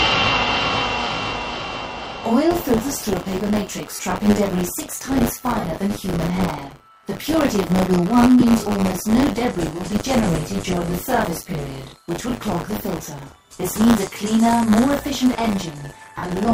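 From 2.5 s to the end, buffer tearing adds a steady 100 Hz buzz: writer and reader cross each period, so roughly a tenth of each buffer replays audio about 40 ms old. Lost LE Audio frames at 3.95–3.99 s, 5.60–5.64 s, 8.40–8.42 s and 16.17–16.23 s (gaps of 37.5, 37.5, 22.5 and about 50 ms, fitting 7.5 ms frames) become brief noisy smears as the decoder repeats scrambled spectra, under light codec coloration.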